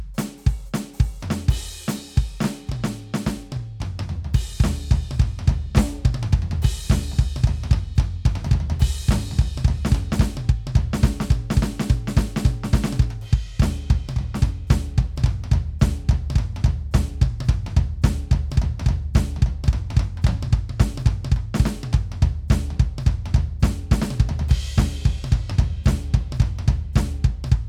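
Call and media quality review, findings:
No faults found in the music clip. Nothing in the playback calls for a ticket.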